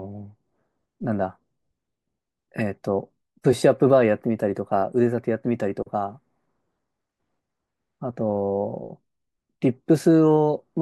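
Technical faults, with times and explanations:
No technical faults are heard.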